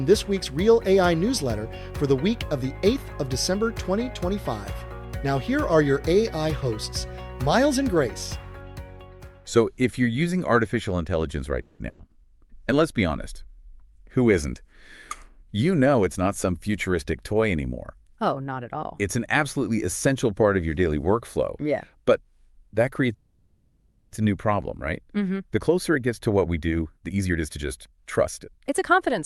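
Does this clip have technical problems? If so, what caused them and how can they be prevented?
Yes. A call audio freeze occurs at 11.61 to 11.80 s and again at 23.14 to 24.13 s, most likely because packets stalled in transit and the jitter buffer ran dry. The receiver stretches the last sound into a fading buzz or hiss for about 0.18 s, then about 0.98 s. The audio resumes where it stopped, adding delay rather than losing content. A steadier network path, with traffic prioritisation for call packets, would prevent these stalls.

A burst of packet loss follows at 11.89 to 12.00 s. About 100 ms of packets never arrived in time to be played, so the receiver held the last sound as a decaying buzz or hiss and then jumped ahead, leaving about 100 ms of audio missing. Forward error correction or redundant packets would let the receiver rebuild short bursts like this.

A jitter buffer speed-up runs from 14.45 to 16.69 s at 108% speed and from 25.39 to 29.18 s at 122%. 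After the delayed audio piled up, the receiver cut repeated short pitch-period slices to shed the excess, about 0.2 s and roughly 0.7 s. The sound becomes hurried while keeping its pitch. Reducing the network stalls that build up this backlog would avoid the catch-up.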